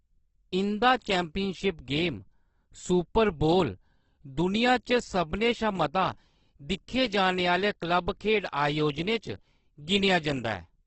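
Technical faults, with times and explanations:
Throughout, Opus compression: the speech sounds grainy, rough and noisy, with nothing above 8.2 kHz. This is likely heavy Opus encoding in its CELT music mode, which fits a bitrate near 12 kbps. Starved bands are refilled with folded or noise content rather than left empty.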